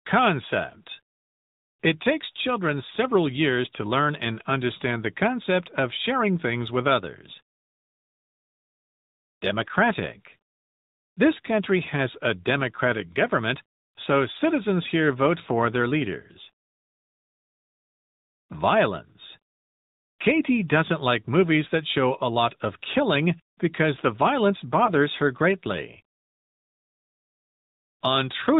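Speech carried through the AMR narrowband mobile codec: nothing passes above 4 kHz and the voice has a plainly buzzy, synthetic edge, consistent with a mode near 10 kbps rather than simple low-pass muffling. Between "killing because the violence" and "her greatly", at 24.86 to 24.90 s, one lost AMR speech frame leaves a brief warbly dip, the decoder stretching the previous sound for 20 ms instead of leaving a hard dropout gap.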